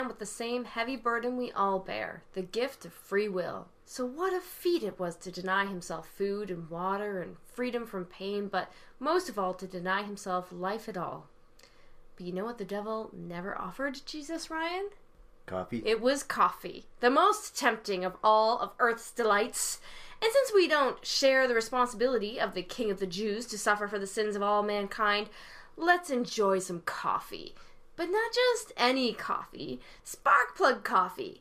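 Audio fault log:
No technical faults can be heard anywhere in the audio, and the signal holds steady in level and continuity the whole way.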